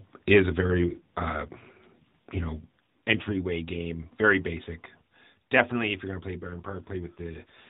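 Right after "is a", at 0.6 s, the speech turns rough and buzzy until 3.5 s, just before "game very basic". That's an AMR rate drop. It sounds like a fall from 12.2 to 5.9 kbps, with fewer pulses per frame. It happens again from 6.4 s, after "you're going to play", to the end.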